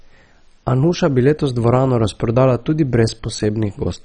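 Throughout the speech, nothing survives above 9.7 kHz, and the upper bands flicker in and out with a gurgling, granular roughness. This is likely heavy MP2 compression, fitting about 32 kbps, starving whole sub-bands. A plain low-pass filter would sound dull but steady and clean.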